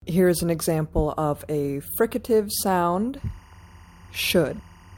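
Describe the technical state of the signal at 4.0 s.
At 4.0 s the signal carries timecode bleed, running from 3.17 s to the end of the clip. Linear timecode from an adjacent track or cable is leaking in, its square wave flipping between roughly 1 and 2 kHz at a rate that fits 23.976 fps code. It sits as a steady chirping warble about 30 dB beneath the sound.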